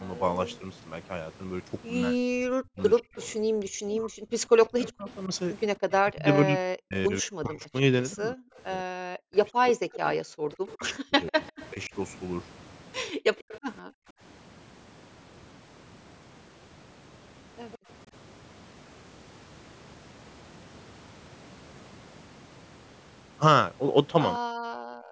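From 0.47 to 13.6 s a faint copy of the speech trails the direct sound by 147 ms, about 20 dB quieter. This is an echo leak, likely from a far-end loudspeaker whose echo canceller let residue through. On a spectrogram it appears as weaker, shifted duplicates of the harmonic bands.

Within that stretch, from 2.09 to 11.94 s, the talker's speech dips and breaks up for roughly five seconds in total, falling as much as around 40 dB. This is speech suppressed in double talk, likely the canceller attenuating both voices while unable to separate them. The waveform shows chopped, collapsed envelope sections.

From 13.13 to 14.17 s the room sound drops out for a few hundred milliseconds, as much as about 40 dB, then returns. This is background gated by the echo canceller while its loudspeaker played. The noise floor on the spectrogram goes abruptly dark, then reappears.

At 17.72 to 17.78 s a brief scrap of echo leak recurs, again 147 ms behind and about 25 dB down, visible as a faint ghost smear.

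At 24.39 to 24.44 s a 50 ms double-talk notch cuts the speech, showing as a sharp gap in the waveform. From 24.72 s to the end the background is gated again, as much as about 40 dB, and the noise floor on the spectrogram goes dark.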